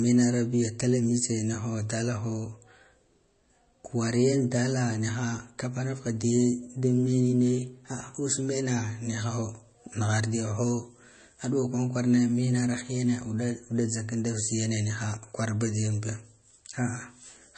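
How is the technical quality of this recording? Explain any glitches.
The quality is clearly compromised, and the damage runs through the whole speech clip. It's most likely MP3 compression at a low bitrate, with the sound pointing to something like 32 kbps. Nothing comes through above about 8.3 kHz, so everything sounds dull. Starved of bits, the encoder drops that treble and switches faint frequency lines on and off between frames, which gives the speech a watery, swirly edge and smeared consonants.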